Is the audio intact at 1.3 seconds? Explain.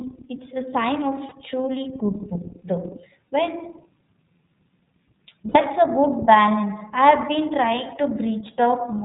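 No. Between 1.28 and 1.33 s, just after "it's a sign" and before "truly good book though", lost iLBC frames left a hole of about 30 ms, which fits one missing 30 ms frame. The decoder filled it by repeating the last pitch cycle blended with noise, so the gap comes out as a brief held, faintly buzzy vowel rather than silence. Because each iLBC frame decodes independently, the voice snaps back cleanly right afterwards.

That moment also sits inside the iLBC codec's coding, which runs through the whole clip. iLBC compresses each frame's excitation on its own, and the plainly audible damage here fits its 13.33 kbps mode with 30 ms frames. Being narrowband, it passes nothing above 4 kHz, so the speech at 1.3 s sounds muffled and band-limited, with a rough, slightly synthetic texture.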